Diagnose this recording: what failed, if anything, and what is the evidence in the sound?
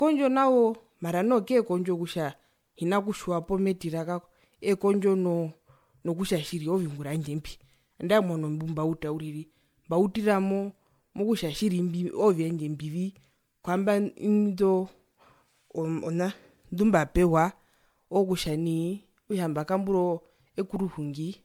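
Codec stage, generation loss: the speech was likely re-encoded about five times as MP3, apparently at 96 kbit/s, leaving swirly, hollow smearing and blurred attacks throughout.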